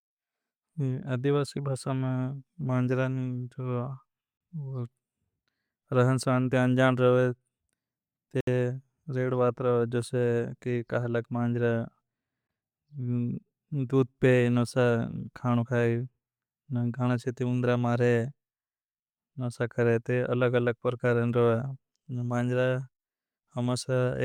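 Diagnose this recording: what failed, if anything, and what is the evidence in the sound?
Hard-edged dropouts to silence cut the speech at 4.37 to 4.41 s (about 33 ms), 8.41 to 8.47 s (about 67 ms) and 12.47 s (about 16 ms), spaced at 4 s intervals. This is a gap between stream segments at playback: mismatched segment timestamps leave holes the player fills with silence, adding time without losing audio.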